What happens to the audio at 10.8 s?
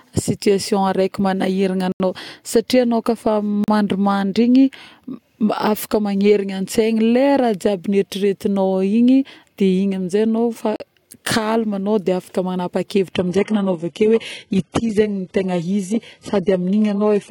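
From 10.76 to 10.80 s the speech drops out in a block of digital silence about 40 ms long. The audio drops abruptly to silence and back with no fade, and the gap is heard as a brief hole. This fits an output buffer that wasn't filled in time.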